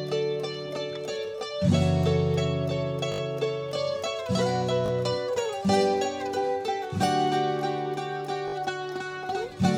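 Repeated buffer stutters interrupt this music at 3.12–3.2 s, 4.86–4.9 s and 8.48–8.54 s. Each time, audio arrived late and the last 20 ms piece replayed with hard joins, looping four, two and three times, before the music resumes without apparent loss.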